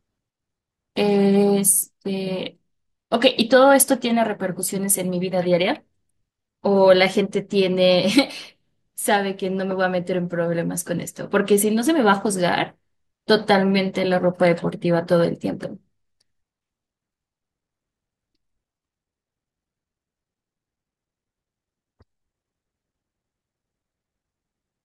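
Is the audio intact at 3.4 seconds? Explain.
Yes, the audio is intact at 3.4 s, with no dropout, click, distortion or other fault audible at that moment.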